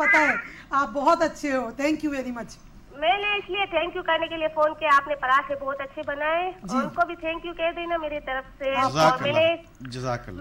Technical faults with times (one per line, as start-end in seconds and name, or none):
none